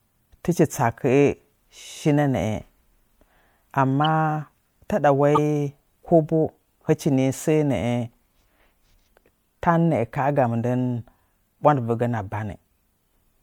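At 4.05 s and from 5.35 to 5.38 s, a corrupt frame decoded gives a brief squeaky blip. Damaged data was played anyway, putting energy at wrong frequencies. The second blip is louder.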